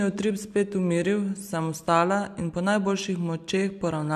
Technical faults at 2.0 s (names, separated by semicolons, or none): none